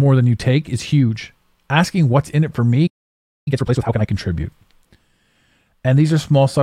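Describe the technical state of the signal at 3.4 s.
At 3.4 s the output is silent. A playback stall runs from 2.87 to 3.48 s, about 0.6 s of dead air cutting the speech off mid-flow. The player likely ran short of buffered data or had its thread blocked, so nothing reached the output.

Right after, from 3.48 to 4.06 s, comes time-compressed catch-up. The player works off its backlog at twice normal speed by removing small slices and cross-fading the joins. The speech sounds hurried but keeps its pitch.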